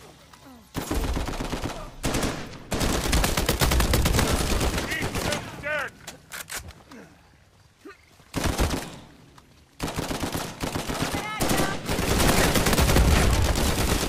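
No technical faults turn up anywhere in the recording, so there is nothing to describe in time order.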